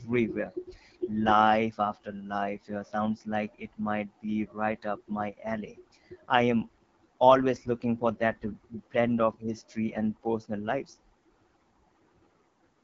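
Throughout, AMR wideband (HD Voice) coding leaves the speech rough and raspy, consistent with AMR-WB's low 8.85 kbit/s mode, and the spectrogram stops flat near 7.3 kHz, with a smeared noise-filled band above 6.4 kHz.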